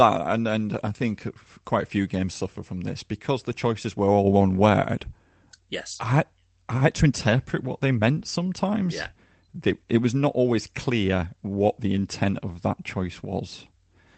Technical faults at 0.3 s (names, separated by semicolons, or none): none